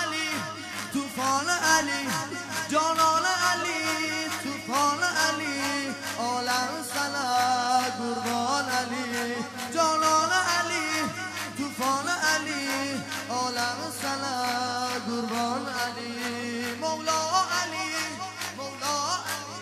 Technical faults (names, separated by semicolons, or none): none